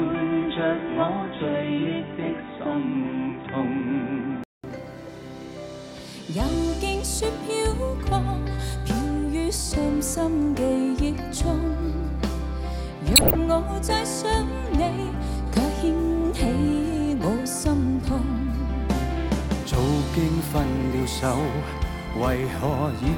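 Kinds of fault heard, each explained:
Input switched to a poorer device: For the first 4.6 s the sound is band-limited, with nothing above 3.8 kHz, a faint extra hiss well under the signal and about the same level. A 200 ms gap marks the switch, likely a change to a narrower-band input.
Corrupt frame decoded: Around 13.16 to 13.35 s a loud error sound, peaking around -5 dBFS, cuts through. A handful of damaged compressed frames were decoded anyway, so misread gains and codes threw energy onto the wrong frequencies for that stretch.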